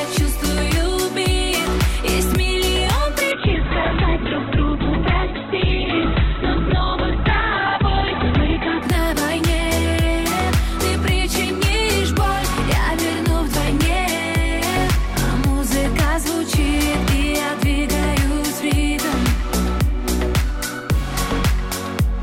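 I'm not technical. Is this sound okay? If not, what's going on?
No. From 3.32 to 8.89 s there is a call bitrate drop: the connection suddenly allowed far less data, so the audio was squeezed hard. It loses its upper range above about 4 kHz and sounds muffled and rough until the quality recovers.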